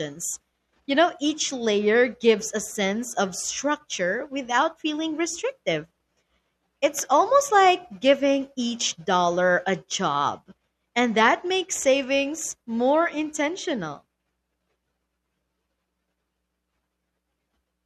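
Speech recording with no audible technical faults anywhere.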